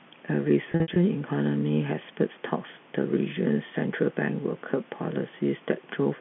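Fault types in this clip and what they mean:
packet loss with pitch repetition: From 0.72 to 0.96 s, 140 ms of audio drops out in short gaps scattered across 240 ms. The receiver fills each gap by repeating the last pitch period, giving a briefly held, buzzy sound. The longest gap is 60 ms.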